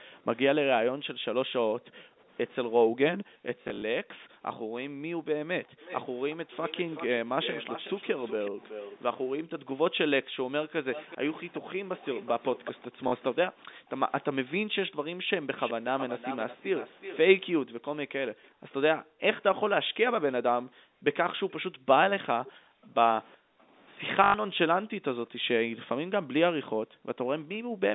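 From 0.91 to 5.8 s the echo canceller gates the background, cutting the microphone by up to about 40 dB, so room sound drops out for roughly two seconds in total. It happens again at 9.59–10.36, 13.57–13.89 and 17.71–27.8 s. Between 3.62 and 3.82 s, 120 ms of packet loss is covered by repeating the last packet, in runs up to 40 ms that fit 20 ms packets. This gives buzzing stutters, repeated at 13.08 s and 24.24–24.34 s. From 5.8 to 8.99 s, and at 10.93–13.36, 15.58–18.47 and 22.45 s, a copy of the sound returns 373 ms late at about 15 to 20 dB down. This is likely an echo leak from a loudspeaker.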